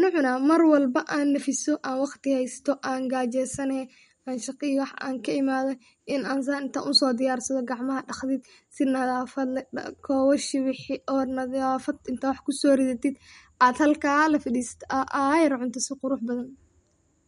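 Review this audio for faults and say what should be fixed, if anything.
MP3 compression artefacts run through the whole speech clip. Nothing is heard above 11.2 kHz, so the treble stops at a fixed wall. The damage is plainly audible. Short of bits, the encoder likely dropped weak frequency lines, and these flicker on and off between frames. That gives the sound a watery, swirly texture. Sibilants turn metallic and attacks smear. The sound points to a low bitrate, around 48 kbps. To prevent this, keep the original uncompressed file or encode at a much higher bitrate.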